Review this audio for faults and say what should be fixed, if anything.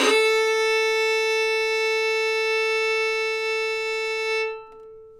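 Nothing needs to be fixed, as the review turns up no faults in this audio.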